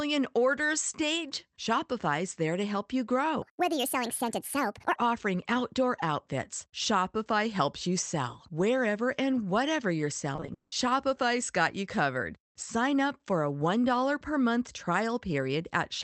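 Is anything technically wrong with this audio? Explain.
Yes, two faults stand out in this speech, which has passed through a call codec band-limited to about 8 kHz.

From 3.42 to 4.96 s, between "there to help you" and "offering outdoor outfits", a section at the wrong speed plays 1.53 times fast, likely from a clock mismatch. It sounds hurried and about seven semitones high, with harmonics visibly stretched upward on a spectrogram.

From 10.36 to 10.74 s, repeated packet loss makes the audio choppy and robotic. Four gaps, the longest 180 ms, are patched by extending earlier sound, which shows as smeared, repeated spectral bands.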